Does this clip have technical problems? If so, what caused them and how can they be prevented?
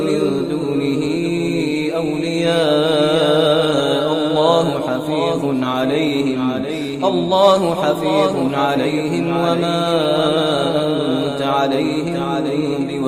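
Yes, there's a doubled audio track running the whole way through: a second full-band copy trails roughly 0.7 s behind, a few dB quieter, with no decay or room colour. It's likely a duplicate capture path or misaligned edit. Route each source once and check the mix for stray copies.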